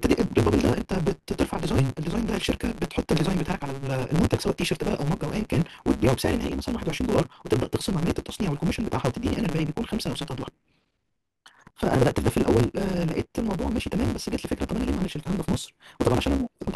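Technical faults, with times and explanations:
Throughout: block size mismatch (truncated). Block ends are discarded, causing a 138 Hz buzz. Speech runs 1.6 times fast, as 512-sample blocks are written but only part of each is read.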